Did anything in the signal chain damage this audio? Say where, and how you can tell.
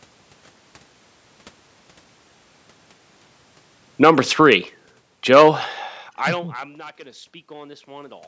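Yes. Automatic gain falling runs from 3.88 to 6.66 s, in the call-processing stage. Around 3 s the talker moves at the microphone, and the gain control pulls its gain down gradually by about 15 dB. The room noise sinks along with the voice, which shows that the processing turned down the whole signal rather than the talker moving away.

Automatic gain rising follows from 6.97 to 8.23 s, in the same gain control. Near 6 s the talker moves off the microphone and the input drops by about 22 dB. The control then raises its gain by about 5 dB over roughly a second, so the speech and the room noise swell together. That shared slow rise marks it as the gain stage reacting, and it recovers only part of the lost level before the clip ends.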